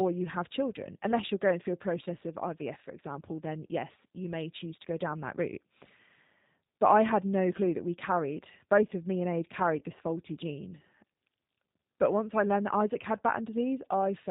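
This is a speech clip carried over a G.729 codec the whole way through, and the damage is plainly audible. The coder rebuilds each 10 ms frame from a vocal-tract filter, a pitch predictor and a handful of pulses, so the voice comes out rough and slightly synthetic, and nothing above 4 kHz survives. The rough, synthetic texture points to the low 8 kbit/s rate. There's also one spot of VoIP packet loss concealed by the speech codec, running from about 9.79 to 9.83 s, right before "this faulty gene". About 20 ms of audio went missing, which fits two lost frames. The decoder filled the gap by extending the last pitch and filter it had while ramping the level down, so you hear a short stretched sound that fades. Because each frame builds on the one before, the voice stays weak or distorted for a moment after the real packets come back.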